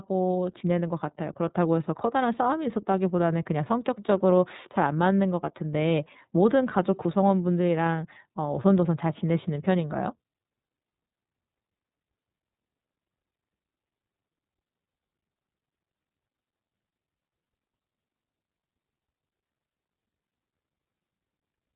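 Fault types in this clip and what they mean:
iLBC codec: a narrowband voice codec that codes each frame's excitation on its own, here in 30 ms frames, and the rough, synthetic edge it leaves on this speech fits its 13.33 kbps mode. The damage is plainly audible throughout. On a spectrogram the energy stops flat at about 3.8 kHz with nothing above.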